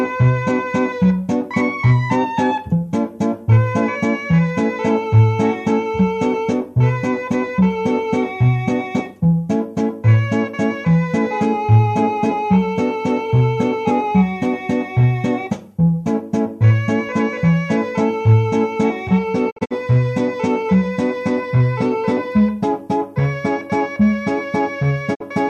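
Quick-faded holes cut the sound from 19.49 to 19.73 s and 25.13 to 25.22 s, a digital broadcast dropout where the receiver muted failed frames.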